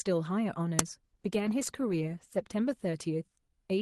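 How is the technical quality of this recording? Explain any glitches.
The recording has two clear faults: a sharp digital click early on, and a long stretch where the speech loses clarity.

At 0.79 s there is a brief, loud crack lasting about 3 ms. This is an uninitialised buffer: a block of memory was sent to playback before any audio had been written into it, so leftover data was played as if it were sound. The burst's length fits a single 64-sample block.

From 1.07 s to 3.57 s the speech turns rough, watery and duller, at its worst for about 1.2 s. This is a call bitrate drop. The call's bandwidth estimate fell, so the Opus encoder was told to spend far fewer bits. The sound fits a fall from around 40 kbps to about 15 kbps, which is low enough to add coarse coding artefacts and shave off high frequencies, including detail that reaches up to about 12 kHz at the normal rate.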